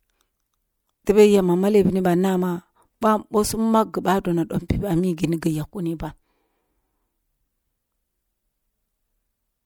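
Pre-echo at 1.05, 3.01, 4.68 and 5.17 s: a brief hiss, 11 to 17 ms long, smears in just before each speech attack, unlike ringing, which trails afterwards.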